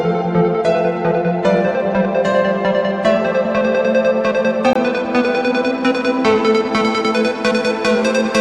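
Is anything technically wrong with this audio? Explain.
Yes. From 4.73 to 4.76 s the sound cuts to silence for about 23 ms, then resumes further along, as if it had kept playing. That gap points to a Bluetooth dropout, likely a single audio packet that reached the headphones too late and was discarded.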